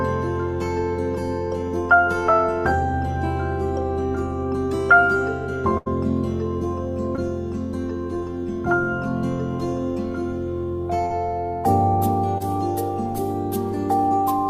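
At 5.77 to 5.88 s, a burst of packet loss drops about 80 ms. The gap is filled with a fading continuation that shows as smeared, decaying spectral bands. At 7.16 to 7.19 s, a short concealed packet loss leaves a brief smeared blip that blends back into the signal. At 11.05 to 11.12 s, a second burst repeats the fading fill over about 46 ms. At 12.38 to 12.42 s, another short concealed loss adds a brief smear.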